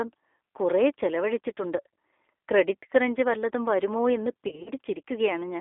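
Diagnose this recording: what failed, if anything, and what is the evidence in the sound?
The codec stage failed throughout. This is G.729 coding at 8 kbit/s. The speech is confined to a 300 Hz to 3.5 kHz line band. It sounds plainly rough and synthetic. The decoder rebuilds each 10 ms frame from a vocal tract filter, a pitch predictor and a few sparse pulses.

The network stage also failed, with VoIP packet loss concealed by the speech codec. It starts at 4.48 s, right after "ക്രഞ്ച് വല്ലതും വരുമോ എന്ന്", and runs to 4.70 s. Short gaps of up to 30 ms are scattered across about 180 ms. The decoder stretches its last pitch and filter with falling gain, and the speech stays weak until it recovers.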